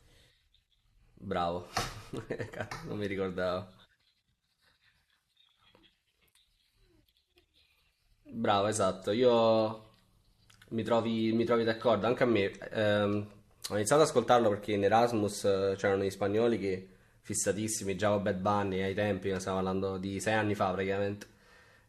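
There are no technical faults to describe in this speech recording.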